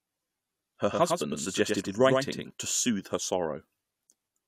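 From 0.91 to 2.51 s the speech gains a flat, echo-like second copy about a tenth of a second behind, a little quieter. It starts and stops abruptly. This doubled audio track likely comes from the signal being captured twice through a slower path.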